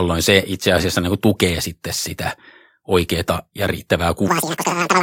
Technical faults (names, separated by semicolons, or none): section at the wrong speed